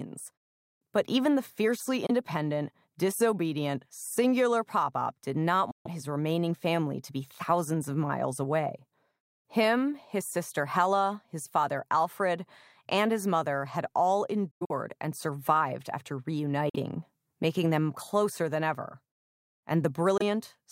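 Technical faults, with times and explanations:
2.06, 5.71, 14.51, 16.69 and 20.18 s: Bluetooth dropout. The sound cuts to silence for about 23, 139, 139, 46 and 23 ms. The first gap follows "even the fiercely", and the third falls between "his mother had all" and "and survived after", split into several gaps across about 186 ms. The sound then resumes as if it had kept playing, which tells this apart from a buffer stall that picks up where it stopped. The likely cause is packets missing the headphones' deadline, with each hole matching whole packets of about 23 ms.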